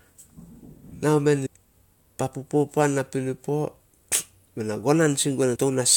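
Damaged data in a compressed stream appears at 1.45 to 1.47 s, just after "nao men", and again at 5.55 to 5.57 s. Corrupted bytes make the decoder misread those frames and lose sync while it hunts for the next valid header, leaving a brief disruption in the speech.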